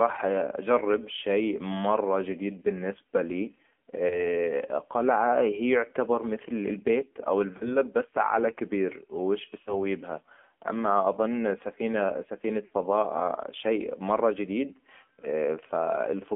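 Across the whole recording the speech passes through the AMR narrowband mobile codec. The line band runs from about 200 Hz to 3.4 kHz, so nothing above that survives, and the voice has the thin, buzzy, synthetic edge of a low AMR-NB mode, consistent with roughly 7.4 kbps. The vocal tract model rebuilds each syllable from a handful of pulses per subframe, and at this rate the damage is plainly audible.

Lost AMR speech frames appear four times. From 4.08 to 4.26 s a brief dip and warble fits a single dropped 20 ms frame, with the decoder repeating its last pitch and filter settings at reduced gain before the voice recovers slightly rough. From 7.58 to 7.76 s, after "يعتبر مثل البيت او" and before "بس علي كبير وش", the same single-frame signature recurs. From 9.62 to 9.76 s, before "لها اما أظن سفينه", the concealment is drawn out and fades, which fits two consecutive frames, about 40 ms, lost. 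From 12.66 to 12.71 s, just after "لها اما أظن سفينه", a shorter drawn-out smear points to another two-frame loss.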